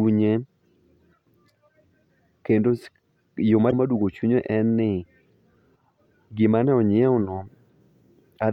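Damaged data in a compressed stream occurs from 3.67 to 3.73 s in this speech. Corrupted bytes at that point make the decoder misread its frames and lose sync until it finds the next valid frame header, leaving a brief garbled blip about 56 ms long.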